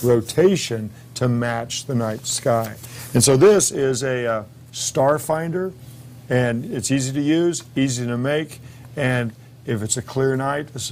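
Nothing goes wrong anywhere in the clip, so there's no fault to point to along the way.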